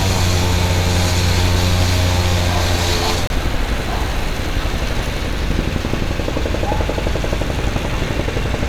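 A gap between stream segments, where two segments' time stamps fail to meet, makes the player insert silence into this sound clip. The result is a hard-edged hole of about 27 ms, from 3.27 to 3.30 s; nothing is dropped, and everything after it arrives slightly later.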